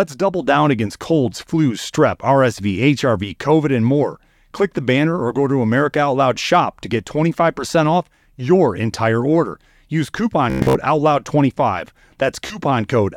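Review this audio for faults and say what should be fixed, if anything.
Bluetooth stutter at 10.50–10.77 s and again at 12.47–12.58 s. Late or lost packets made the receiver replay its last short buffer, giving a machine-gun buzz. About 0.21 s of speech is lost in the first burst, the longest gap about 0.11 s, and about 0.03 s in the second. Keep the transmitter close, with clear line of sight and less 2.4 GHz interference, or record over a wired connection.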